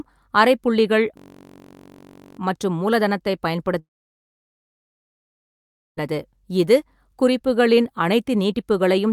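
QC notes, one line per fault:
1.17–2.39 s, system hang loop: the sound freezes into a steady buzz at about 46.9 Hz, ending just before "மற்றும் மூலதனத்தைப்". A single 21.33 ms slice of audio repeats exactly, 57 times, which fits a 1024-sample buffer. The playback hardware kept cycling the same ring buffer while the computer or driver stalled. Because the loop is so short, the repeats fuse into a tone rather than a stutter. Little or no speech is lost, and the audio resumes where it stopped.
3.79–5.99 s, long network dropout: right after "அரைப்புள்ளிகள் மற்றும் மூலதனத்தைப்", the last sound smears into a brief fading continuation, then gives way to near-silence for about 2.1 s. About 2.18 s of audio never arrived, likely because of a network outage. The receiver padded the gap with concealment that decays almost at once. When the signal returns it picks up further on, without the missing stretch.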